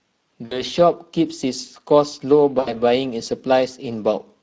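Throughout this speech recording there is a hoarse, noisy, grainy coarseness, and the top end sounds like hiss rather than real detail. Both point to the Speex codec at a middle setting, which fits roughly 16.8 kbps. That setting leaves too few bits for the excitation and fills the band above 4 kHz with shaped noise. From 0.45 to 0.63 s and again from 2.59 to 2.80 s, the sound smears into a stretched, fading fill and stays weak briefly afterward. This is VoIP packet loss concealed by the speech codec. The decoder extrapolates over gaps of about 60 ms and 80 ms, which fits three and four lost 20 ms frames.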